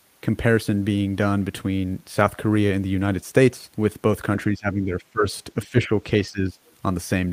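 From 4.53 to 5.27 s the speech sinks sharply, by around 20 dB at its worst, then dips again at 5.65 to 5.93 s, by around 10 dB, and at 6.29 to 6.57 s, by around 15 dB. That pattern is speech suppressed in double talk, likely an echo canceller that couldn't tell this talker from loudspeaker echo while the far side was speaking, so it pulled everything down and left the speech sounding ducked.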